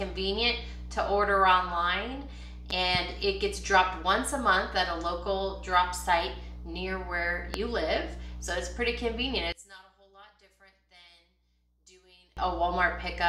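The clip is an audio recording with two kinds of fault. Two loud pops occur between 2.70 and 2.97 s, landing about 10 dB above the sound beneath them. A single, louder pop follows from 7.54 to 7.57 s, roughly 20 dB above the sound. The sound carries on underneath each pop. A sudden voltage pulse, from a plug, switch, static or driver glitch, is the likely cause. From 9.52 to 12.37 s, the mono sum collapses by about 27 dB. Material common to both channels cancels, leaving only a faint remainder. This points to one channel inverted, with its polarity likely reversed against the other.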